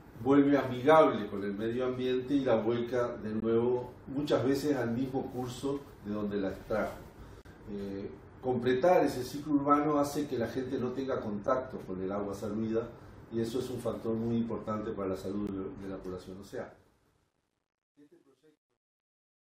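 At 3.40 to 3.42 s, 7.42 to 7.45 s, 11.47 s and 15.47 s, hard-edged holes of silence between about 10 and 34 ms cut in, spaced roughly 4 s apart. This is a gap between stream segments: mistimed boundaries leave space that is filled with silence. Unlike a dropout, nothing is missing on either side.

From 16.02 s, as the fade-out that begins around 16 s drops toward silence, it turns grainy. From 17.23 s to the end it is at its worst. This is truncation distortion on a fade, which fits a level stage keeping only 11 bits with no dither. It tracks the falling level, unlike steady noise or a gate.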